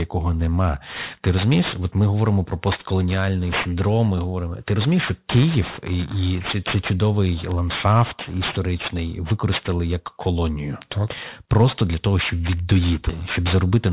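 From start to finish the speech has a gritty, metallic edge on sibilants, with energy packed hard against 4 kHz. This is aliasing: the sample rate was cut, which fits a drop to 8 kHz, without an anti-alias filter, so content above 4 kHz folded back as spurious tones only about 15 dB down.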